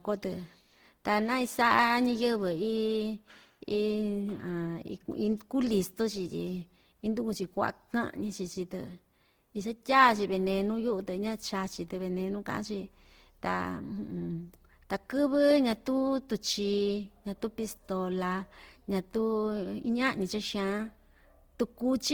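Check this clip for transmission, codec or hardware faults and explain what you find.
One codec fault runs through the whole speech clip. Opus compression, likely, is present from start to finish. The encoder holds the fullband energy of each band up to about 20.2 kHz but starves the detail at what sounds like a bitrate around 16 kbps. It fills the gaps with noise and folded content, so the speech comes across plainly rough and grainy rather than swirly.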